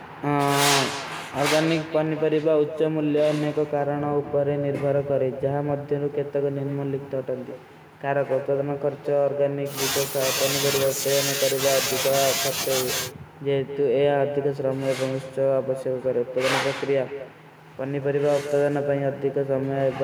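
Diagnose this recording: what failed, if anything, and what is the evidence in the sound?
Every phrase of the speech is trailed, for the whole clip, by a fainter, thinner copy about 12 dB down and roughly a fifth of a second later. That is echo with no canceller in call processing: the far end's loudspeaker feeds its microphone, and nothing subtracts it.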